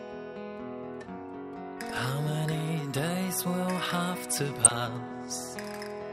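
The audio is dull throughout, with a gurgling, granular texture as upper frequency bands drop in and out and the remaining bands sound coarse. This plainly audible damage is likely MP2 compression at a low bitrate, around 80 kbps, where MPEG Layer II runs short of bits for its 32 sub-bands, shuts off the top ones and quantises the rest roughly. The artefacts are steady over the whole clip, which sets them apart from a transmission fault. From 4.50 to 4.78 s there is a burst of DAB burbling: short blips of noise appear in individual sub-bands as bit errors from weak reception slip past error correction into the MP2 data. The stretch points to 14 frames being hit at an error rate of a fraction of a percent. Unlike the constant codec dullness, this is a brief, localised patch that comes and goes within about a quarter of a second.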